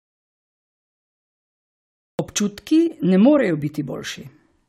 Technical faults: audio dropout to silence

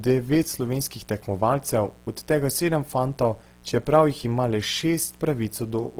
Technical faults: mains buzz; Opus compression

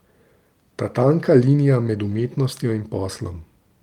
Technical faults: lost packet rebuilt from error correction

